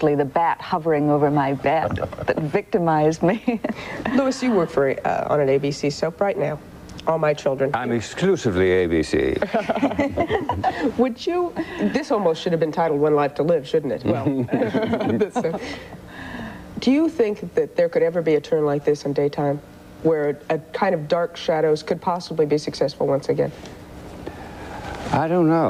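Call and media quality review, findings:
Call and media quality review findings: no faults heard in this clip.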